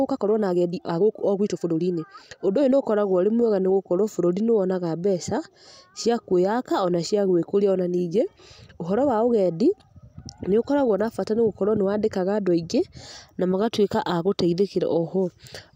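Software likely compressed the opening of this speech recording to fit a shorter length, running it about 1.36 times faster while holding pitch steady by dropping short slices. From 0.0 to 2.82 s the time-stretched section sounds rushed before the pace abruptly settles.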